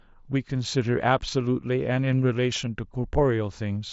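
At 1.93 to 1.96 s, concealed Bluetooth headset packet loss drops about 22.5 ms, which fits three lost frames. The phone repeats recent waveform, giving a brief buzzy hold and a slight warble on recovery. At 3.15 s a single 7.5 ms loss is nearly hidden.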